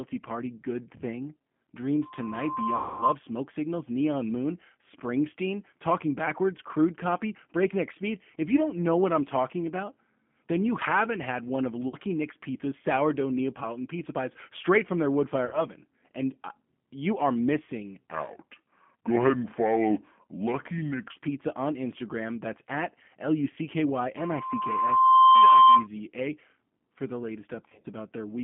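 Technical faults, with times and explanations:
Throughout, G.729 codec: the speech is band-limited to roughly 150 Hz to 3.4 kHz and has a plainly rough, synthetic edge, which fits 8 kbit/s pulse-coded reconstruction. On a spectrogram, energy stops sharply near 3.4 kHz and the harmonics look smeared.
2.01–3.15 s and 24.17–25.87 s, loudspeaker feedback squeal: a 1 kHz tone swells over roughly a second as the microphone-loudspeaker loop runs away. It peaks around 10 dB and then 15 dB above the speech. The spectrogram shows a bright horizontal line at 1 kHz thickening as it grows.
2.76–3.04 s, 11.88–11.96 s, 15.46–15.61 s and 27.68–27.86 s, VoIP packet loss concealed by the speech codec: the decoder repeated its last pitch and filter, so the sound becomes a fading buzzy tone for 240, 50, 70 and 100 ms. The final event comes in short bursts of up to 30 ms scattered across 160 ms. On the waveform the envelope becomes regular and decays, and the speech stays weak just after each gap.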